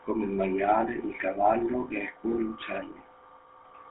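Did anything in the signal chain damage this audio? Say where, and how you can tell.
Yes, at the codec stage: GSM full-rate coding throughout, plainly buzzy and gravelly from pulse-driven resynthesis. A spectrogram shows a hard ceiling near 3.8 kHz, consistent with narrowband GSM coding at 13 kbps.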